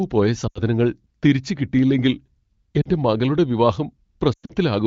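Lost AMR speech frames occur at 0.47–0.61 s (80 ms), 2.82–2.88 s (40 ms) and 4.34–4.52 s (140 ms lost, scattered, longest run 100 ms). Each gap becomes a smeared, quickly fading stretch rather than a clean cut or click, with speech returning briefly rough.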